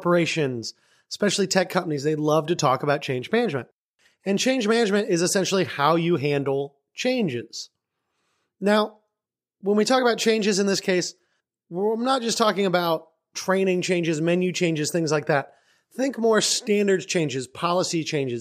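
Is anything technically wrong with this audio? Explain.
Yes. Sample clock jitter runs through the whole speech clip. The converter's clock wanders by roughly a microsecond or two. So each sample lands slightly early or late. Where the waveform changes fastest, that timing error turns into a level error. Here it sits around 40 dB below the signal. It sounds like a faint hiss or grit riding on the speech. It grows on loud and bright sounds and disappears in the pauses.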